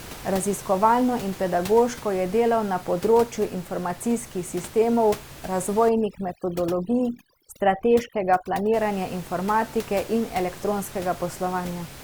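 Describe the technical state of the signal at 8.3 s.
At 8.3 s the signal sits inside a stretch of overdone noise removal running from 5.89 to 8.74 s, ending just before "informatike in". The suppressor is pulling individual frequency bands down wherever they approach its noise estimate, so quiet speech detail vanishes along with the room noise, which elsewhere sits about 18 dB below the speech. The background falls to near-silent gaps with twinkling specks. A spectrogram shows patchy, hollowed bins and isolated bright dots between words.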